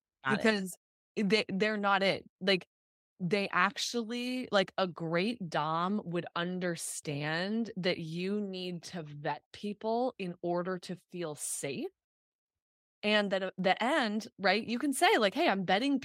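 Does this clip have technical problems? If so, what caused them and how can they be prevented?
No, there are no technical problems in this clip.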